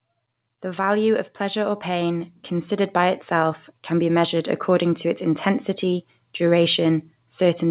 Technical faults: automatic gain rising

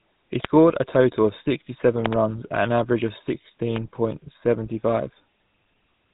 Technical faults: GSM full-rate codec

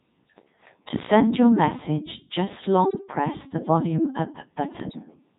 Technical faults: Codec 2 vocoder; bit errors on digital voice radio

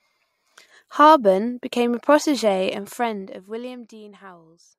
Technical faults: none

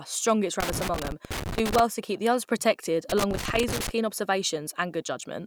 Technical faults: loose connector crackle

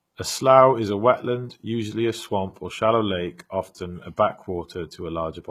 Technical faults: HE-AAC compression

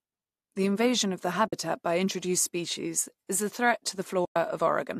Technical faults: AAC frame loss with muting

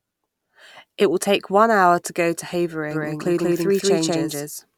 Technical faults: doubled audio track

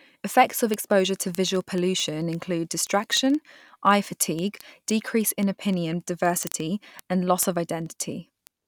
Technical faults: word clock ticks

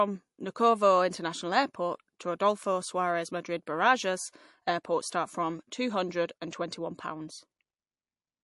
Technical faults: MP3 compression

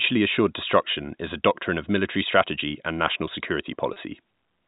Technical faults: packet loss with pitch repetition

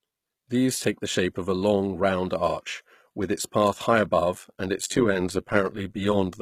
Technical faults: HE-AAC compression; overlap-add ripple

